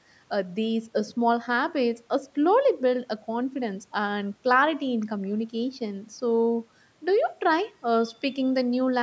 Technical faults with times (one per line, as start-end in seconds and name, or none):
none